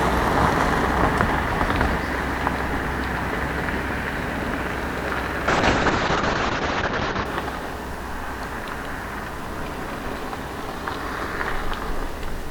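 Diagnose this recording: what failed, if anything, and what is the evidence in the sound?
A call bitrate drop at the codec, 5.49 to 7.31 s, cuts bandwidth from 20 kHz to 8 kHz; the watery, muffled sound fits about 6 kbps.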